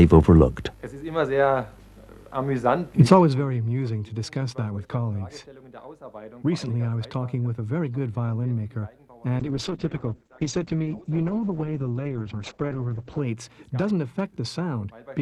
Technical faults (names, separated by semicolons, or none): zipper noise; call bitrate drop